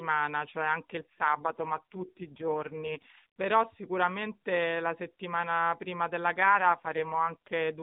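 From 1.00 to 3.26 s and again from 6.40 to 7.50 s, an AMR rate drop makes the speech rougher and buzzier, consistent with a fall from about 12.2 to 4.75 kbps. Unlike packet loss or a bandwidth switch, there's no gap and no change in band.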